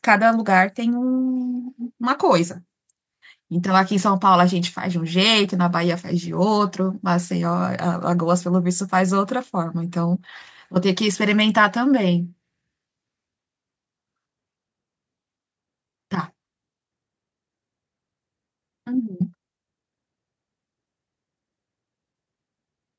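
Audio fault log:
Nothing stood out on listening to this speech, which has passed through a call's microphone processing and carries nothing above 8 kHz.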